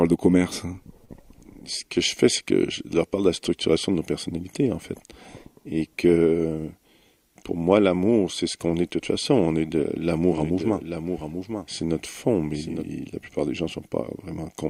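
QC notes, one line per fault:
1.05 to 1.22 s: short stall from a late packet. A packet arrived late and the jitter buffer ran dry. The receiver held the last sound for about 35 ms, then resumed at the same point. Nothing is lost, but one sound drags slightly.
10.32 to 12.86 s: doubled audio track. A second full-band copy plays roughly a second behind, a few dB quieter, with no room colour. It starts and stops abruptly. This is likely the same audio captured again through a slower path.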